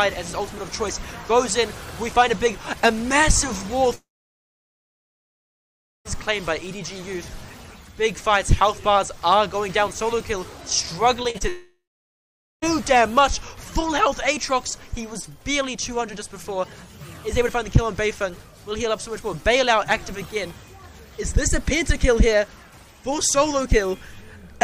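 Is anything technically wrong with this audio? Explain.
Yes. The sound has two long network dropouts and a brief cluster of short concealed packet losses just before the second one.

The long network dropouts run from 3.95 to 6.07 s and from 11.48 to 12.64 s. At each, the last sound is carried on briefly as a fading buzz, then about 2.0 s and 0.84 s of silence follow. The audio resumes further along, with roughly 2.1 s and 1.1 s of material gone. This is likely a stall in delivery so long that the receiver's concealment gave out. The stretch of outright silence and the jump in the audio set it apart from concealed loss.

The short concealed packet losses come at 11.23–11.26, 11.30–11.36 and 11.38–11.42 s. Each is only 20 to 40 ms of audio that arrived too late to decode. The receiver extended the preceding sound across each hole and blended back in, so these are heard as quick smears or wobbles rather than gaps. 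Nothing falls silent and the flow isn't broken, which distinguishes them from the dropout that follows immediately after.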